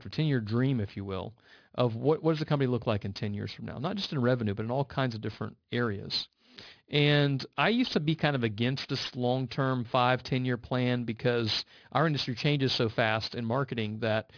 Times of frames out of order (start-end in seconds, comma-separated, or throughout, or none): none